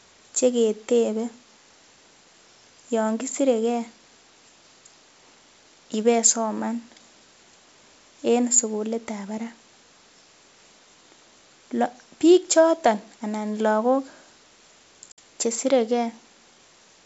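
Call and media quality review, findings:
Packet loss on an ADPCM call, 15.12–15.19 s: hard-edged 60 ms silence, about three packets' worth. Probable component: network path into the G.722 decoder. Mechanism: the decoder's adaptive predictor and step size lose sync with the sender's, so speech resumes slightly distorted before re-converging. Upper-band hiss from the 64 kbit/s G.722 coding faint.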